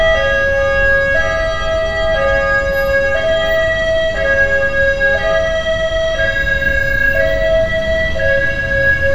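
Nothing goes wrong anywhere in this recording of sounds; there are no technical faults to point to at any moment.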